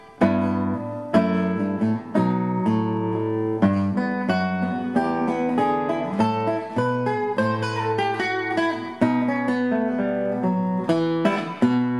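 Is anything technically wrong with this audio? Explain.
Yes. From 0.12 s to 11.98 s there are clock slip clicks, with one sample dropped or repeated roughly every 20 ms, about fifty a second, so they run together into a rattle. The likely cause is two unsynchronised device clocks about a thousand parts per million apart.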